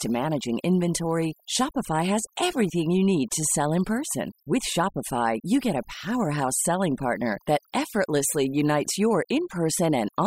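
Overdone noise removal runs through the whole of this speech clip, from start to finish. A noise reduction stage set far too aggressively is cutting individual frequency bands hard whenever they sit close to its noise estimate, and the softer parts of the voice fall below that threshold along with the noise. Between phrases the background collapses to near silence flecked with twinkling, chirpy specks.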